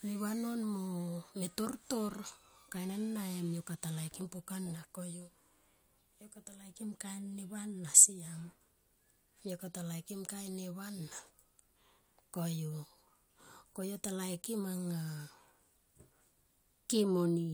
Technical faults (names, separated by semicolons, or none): none